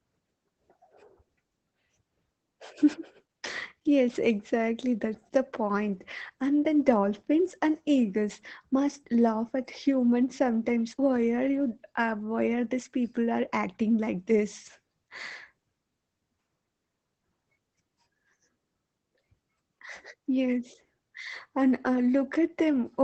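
From start to finish the speech carries Opus voice compression: the band stops near 8 kHz, and the coarsely coded linear-prediction excitation leaves a hoarse, faintly robotic buzz, which fits SILK at roughly 12 kbps. Unlike plain low-pass filtering, the voice texture itself is roughened, without MP3-style metallic swirl.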